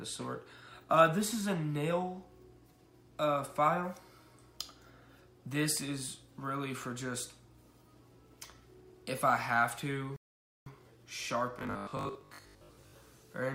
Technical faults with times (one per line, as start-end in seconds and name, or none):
10.16-10.66 rebuffering stall
11.59-12.93 robotic sound from repeated short buffers